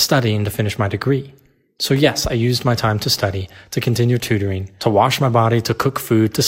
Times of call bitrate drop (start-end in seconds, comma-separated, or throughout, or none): none